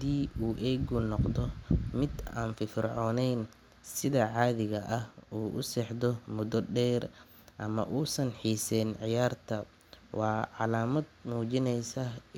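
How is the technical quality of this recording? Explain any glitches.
Nothing technical gets in the way here; the speech carries on without a single glitch worth pointing to.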